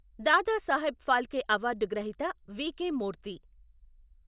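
No technical faults are audible.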